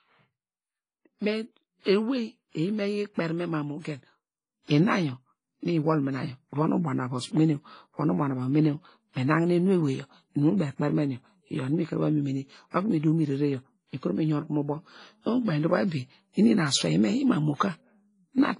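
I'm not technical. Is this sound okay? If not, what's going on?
No. Two problems can be heard in this speech recording.

The first runs through the whole clip and sounds like heavy WMA compression, likely from saving it in that format at a low quality setting. The encoder has thrown away fine detail, so the sound rings and smears, with a hiss that swells and fades along with the speech. Everything above about 10.4 kHz is gone, which takes the crispness out of consonants.

The second is a sudden gain jump at 4.69 s. From that moment to the end, the level steps up abruptly instead of rising gradually, and the background noise gets louder along with the speech. This is likely a volume setting that was changed while recording or processing without being faded in.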